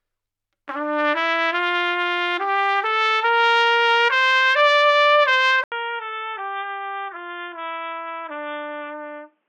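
An everyday sound recording that at 5.64 s drops out for about 80 ms, then returns roughly 10 dB quieter and dull, with nothing above 3.6 kHz and a new noise floor around 45 dB down: likely an input switched to a poorer device. A spectrogram shows the upper band cut off flat from there to the end.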